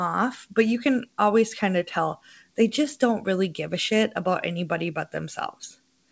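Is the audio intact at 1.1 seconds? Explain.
Yes, the audio is intact at 1.1 seconds, with the speech passing cleanly through the call path and no dropout, glitch or distortion at that moment.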